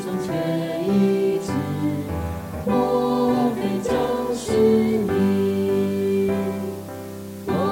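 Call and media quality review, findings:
Low bit depth with dither, throughout, 0 to 7.7 s. Constant, even hiss sitting roughly 25 dB under the signal, with no grit or distortion. Noise floor is consistent with about 7-bit quantisation after dither. Probable component: a requantisation or format-conversion stage. Dither randomises the rounding error, so it comes out as steady broadband noise.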